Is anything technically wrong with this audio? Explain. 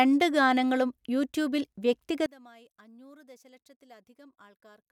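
Yes. From 2.26 s to the end, the speech drops by about 27 dB to a faint residue, likely from one channel inverted: with one stereo channel's polarity reversed, the shared centred content cancels in a mono sum, leaving only the small inter-channel difference.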